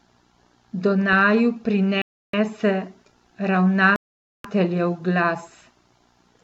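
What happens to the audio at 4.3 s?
The speech drops out completely at 4.3 s, inside a silent gap that runs from 3.96 s to 4.45 s, just under half a second, before the sound resumes. This is a Bluetooth stall, likely caused by radio interference delaying packets to the headphones. With nothing arriving, their small playback buffer emptied and output went silent until the retransmitted packets came through, after which the speech picked up again.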